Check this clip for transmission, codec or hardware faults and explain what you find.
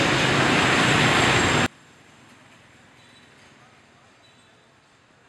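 One fault is present. From 1.66 s to the end, the sound collapses by about 32 dB, likely one channel inverted cancelling shared content in mono; the waveform shrinks to a thin, near-flat trace.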